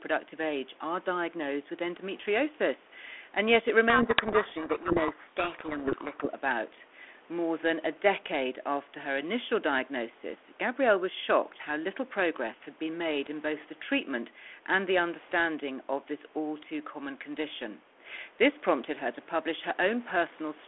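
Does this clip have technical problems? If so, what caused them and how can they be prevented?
Yes. From 3.9 to 6.27 s there's a codec payload misread: the two ends disagree on the bit order of the G.726 code words, so the decoder unpacks scrambled values and the speech gets buried in harsh distortion until it clears. To prevent it, make sure both endpoints negotiate and use the same G.726 packing order.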